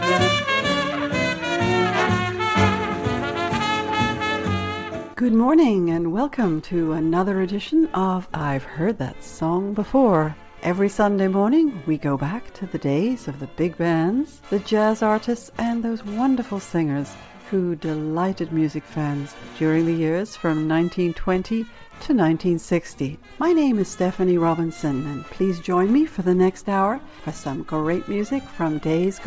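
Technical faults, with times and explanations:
No technical faults are present, so there are no times or explanations to give.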